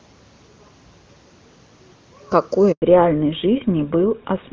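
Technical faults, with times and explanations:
2.72–2.82 s, handover gap: the sound dies away and a 100 ms silence follows while the call moves between networks and no speech frames arrive. On the waveform this is a flat line. On the spectrogram it is a blank vertical strip across every frequency.
2.82 s to end, fallback to narrowband: from the gap onward nothing sits above 4 kHz, so the speech turns duller and rougher. The sound fits a drop from top-rate HD Voice to a GSM full-rate codec. On the spectrogram, energy that reached about 7 kHz before the gap now stops at a hard horizontal ceiling at 4 kHz.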